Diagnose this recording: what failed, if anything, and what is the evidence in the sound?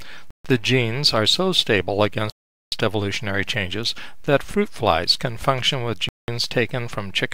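The playback stage failed three times, with the sound cutting to full silence at 0.31 s for about 140 ms, at 2.30 s for about 420 ms, and at 6.09 s for about 190 ms. Each time it picks up where it stopped or slightly later. This is likely a Bluetooth stall, where radio interference delays packets until the headphone buffer empties. Unlike network packet-loss concealment, the gaps are pure silence with no smeared or synthesised fill, and unlike a clock-drift glitch, they are long and irregular.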